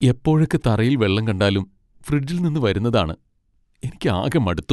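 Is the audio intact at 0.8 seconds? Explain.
No. From 0.23 to 4.44 s the speech carries a click about every 0.6 s, roughly seven in all, so 0.8 s falls within that run. This is clock drift buffer slips, likely from two devices' clocks disagreeing by a few hundred parts per million, forcing a few samples to be dropped or repeated at each slip.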